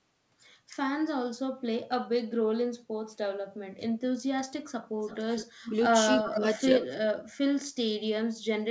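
Background gated by the echo canceller, at 2.78 to 2.91 s and 3.44 to 3.69 s: the canceller clamped the microphone while the loudspeaker played, so the room sound drops by about 15 dB and then about 18 dB before returning. Echo leak, from 5.02 to 5.46 s and 6.21 to 6.84 s: a faint copy of the speech trails 324 ms behind, roughly 15 dB and then 10 dB below the voice, likely residue the loudspeaker side's canceller failed to remove. Speech suppressed in double talk, at 5.56 to 5.74 s, 6.24 to 6.6 s and 7.0 to 7.17 s: the voice sinks in short pieces, hardest near 7.0 s where it almost vanishes, likely because the canceller could not tell its talker from the echo while both sides spoke. Throughout, the audio carries nothing above 8 kHz, which fits a wideband call codec.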